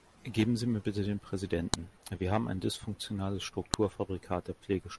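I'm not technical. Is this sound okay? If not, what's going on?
No. There's a file header played as audio: sharp clicks at 1.74 s, after "mir bitte den", and 3.74 s, after "wir haben ein dysfunktionales", where two-second pieces were joined with their file headers left in. The clicks come exactly two seconds apart regardless of what the speech is doing, which sets them apart from clipping or dropouts.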